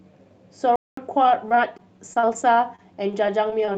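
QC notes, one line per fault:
0.76–0.97 s, playback stall: the sound halts mid-flow for about 216 ms and then resumes, likely because the player's buffer ran dry or its output thread was blocked. The waveform drops to a flat line and the spectrogram shows a blank vertical band.
1.23–2.30 s and 2.76–3.76 s, repeated packet loss (robotic sound): short holes of up to 34 ms and 26 ms recur in quick succession. Each is patched by stretching the preceding sound, which gives a choppy texture. The spectrogram shows smeared, repeated frames and brief dropouts.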